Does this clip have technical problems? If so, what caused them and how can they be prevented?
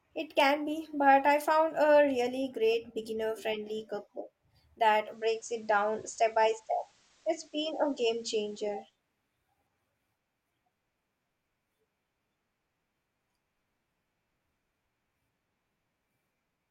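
Yes. Between 4.96 and 8.98 s the hybrid receiver lost its digital signal and blended to the FM analogue broadcast over about 0.3 s. Hiss rises to roughly 35 dB below the sound, and the level shifts about 2 dB. A stronger, steadier antenna signal prevents this.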